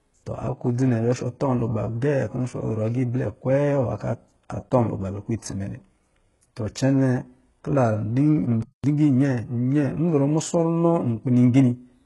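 Throughout the speech, the treble sounds heavily synthetic, with s sounds gritty and lispy and nothing above 11.5 kHz. This is likely HE-AAC compression at a very low rate, around 12 kbps: only the lower spectrum is coded and the upper bands are copied from it, so harmonics fail to line up.

From 8.62 to 8.84 s, the audio falls silent mid-flow for about 213 ms before resuming. A playback stall is the likely cause: the player ran short of data or was blocked, and output stopped until it recovered.

From 8.84 to 9.26 s, the speech then rushes forward at 1.5 times normal speed while keeping its pitch. This is time-compressed catch-up: to clear the backlog built up during the stall, the player removed small pieces and cross-faded the remaining audio together.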